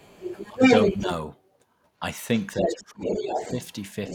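From 0.0 to 0.99 s a second voice runs under the speech, the other side's voice leaking through. It sits a little louder than the talker. The likely cause is loudspeaker playback reaching the microphone with the echo canceller leaving a residue. Inside that stretch, from 0.49 to 0.62 s, the talker's own speech dips by roughly 15 dB. This is speech suppressed in double talk: with both sides active, the canceller likely could not tell its talker from the echo and attenuated everything. A shallower dip of roughly 5 dB follows from 0.99 to 1.09 s, as the leak ends. From 2.38 s to the end the other side leaks through again, now roughly level with the talker, so the two voices compete directly. Between 2.57 and 3.4 s the talker is again pushed down by around 15 dB, losing presence for most of that span while the echo keeps going.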